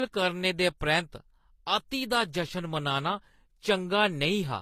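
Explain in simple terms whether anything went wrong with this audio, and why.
Something did go wrong, and it runs through the whole clip: the speech sounds like it's been through transcoding between lossy codecs. Nothing comes through above about 14.9 kHz, so the top end feels dulled, and there's a mix of two different kinds of compression smear layered together. The likely cause is a file squeezed first as HE-AAC and then re-squeezed as Vorbis, with the second pass keeping the first one's damage and adding its own.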